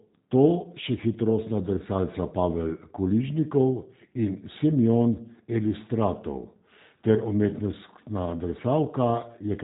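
Speech, coded throughout with G.729: nothing above 3.8 kHz, plus a rough, synthetic buzz from pulse-modelled excitation, which fits 8 kbit/s and sets it apart from simple band-limiting.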